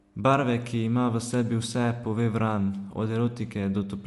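From start to finish the speech has a breathy, grainy edge, and nothing is heard above about 11.5 kHz, so the top of the band is simply missing. Where upper detail should be, a hiss-like texture replaces it. This is likely Bluetooth LC3 compression: the LE Audio codec discards much of the high spectrum and fills the gaps with noise, and the damage here is plainly audible, which fits a rate near 48 kbps in 10 ms frames.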